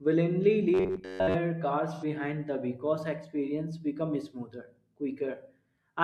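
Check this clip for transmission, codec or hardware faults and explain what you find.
Two faults are audible in this speech clip. From 0.74 to 1.36 s there is robotic sound from repeated short buffers: a rigid, metallic buzz near 94 Hz over most of that stretch. It is likely caused by late audio being covered by looping a roughly 11 ms chunk. Unlike codec smearing, the pitch stays fixed. From 1.93 to 2.04 s, just before "the because experience becomes", an AAC frame loss with concealment leaves about 85 ms of smeared, phasey sound, which fits two lost frames rebuilt from the last good spectrum. It has no steady buzz.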